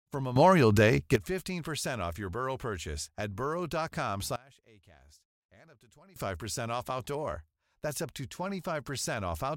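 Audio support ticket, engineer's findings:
Sudden gain jump, 0.36–1.16 s: speech and noise floor step up together by about 12 dB, then drop back. Likely a gain setting applied without a ramp, switching level in a single sample.

Sudden gain jump, 4.36–6.16 s: level falls by about 23 dB, background included, restored at the end. Likely an unramped gain change or bit shift in the digital path.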